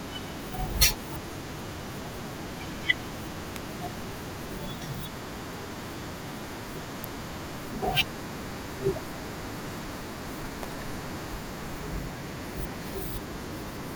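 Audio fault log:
3.56, 7.04 and 10.63 s: electrical switching spike. Sharp snaps over the speech, two at about -15 dBFS and the last softer, likely a nearby switch arcing into the line. Each is a thin full-height spectrogram stripe and a sharp needle in the waveform.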